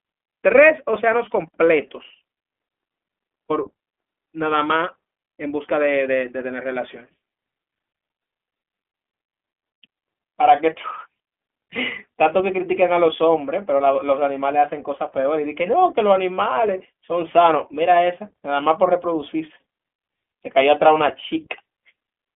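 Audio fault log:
Throughout: iLBC codec. The speech has passed through a narrowband VoIP codec running at 15.2 kbps, which fits its 20 ms frame mode. Each frame's excitation is coded on its own, with no carry-over from the frame before. Nothing reaches above about 3.6 kHz, and the line band sits roughly between 250 Hz and 3.4 kHz. The result is thin, muffled speech with a plainly audible rough, slightly synthetic grain.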